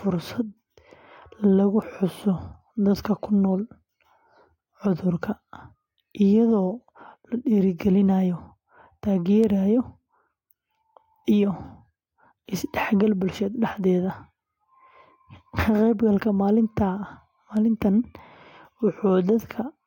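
There are three bit error spikes, at 1.82 s, 9.44 s and 17.57 s, each a single sharp tick unrelated to the speech. A flipped bit knocks one to three samples off by a power of two before snapping back. The middle one peaks around -18 dBFS, the others around -24 dBFS.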